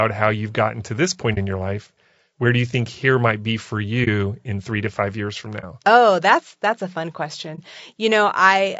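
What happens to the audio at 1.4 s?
Just after "gotten to this point" and before "in your life", the audio briefly vanishes from 1.34 to 1.38 s. This is AAC frame loss with muting: about 30 ms of sound, consistent with a single lost frame, was replaced by silence in the decoder. Because the codec's overlapping windows fade the signal out and back in, the dip has soft edges. A hard sample dropout or buffer gap would instead cut off abruptly, often with a snap at each edge.

Around that moment, as throughout the clip, the speech is rough and grainy, with noise filling the spaces between harmonics and a thin, synthetic-sounding top band. This is plainly audible low-delay AAC compression, likely AAC-ELD at a bitrate that fits about 32 kbps. At that low bitrate the spectrum is quantized coarsely in every frame, so the graininess is constant rather than appearing as a brief event like the muted frame.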